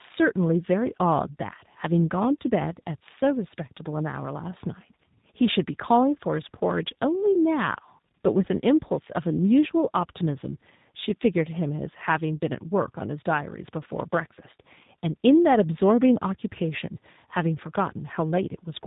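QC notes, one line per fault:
Throughout: tandem speech coding. The speech sounds rough, muffled and warbly, with nothing above 3.8 kHz, which fits an ADPCM stage re-encoded into a G.729-style 8 kbit/s coder.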